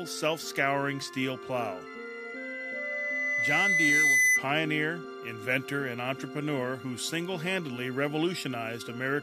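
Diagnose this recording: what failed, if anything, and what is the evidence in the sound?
Loudspeaker feedback squeal in the analogue mic-speaker loop: gain passed one at 2 kHz, so a tone swells over about two seconds, 1.86 to 4.46 s.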